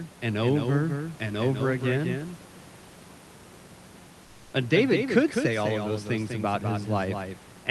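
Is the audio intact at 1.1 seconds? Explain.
No. At 1.1 seconds, as throughout the clip, there is a doubled audio track: a second full-band copy follows about 200 ms behind, roughly 5 dB quieter, likely from a second capture or an out-of-step edit. Unlike an echo or reverb, it is a single clean repeat with no decay or room colour.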